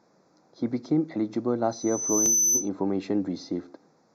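Throughout, the speech sounds hollow. This is channel delay causing comb filtering. One channel arrives a fraction of a millisecond late, and the mono sum cancels at evenly spaced frequencies. The first notch sits near 3 kHz.

At 1.71 s, a loudspeaker feedback squeal begins. A microphone is picking up its own loudspeaker. The loop gain exceeds one at 6 kHz. That tone swells over most of a second and ends up a few decibels above the speech. It stops at 2.70 s.

At 2.26 s, during the squeal, there is a tiny skip. This is overlap between stream segments. Two segments' time stamps overlap, so the player discards a sliver of sound. The waveform jumps there.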